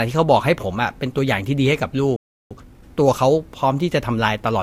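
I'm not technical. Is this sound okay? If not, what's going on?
No. At 2.16 s the speech cuts to silence for about a third of a second, a playback stall, likely the player briefly running out of audio data. From 2.51 to 2.85 s it then sounds hurried at normal pitch. That is time-compressed catch-up: the player plays at twice speed to clear its backlog.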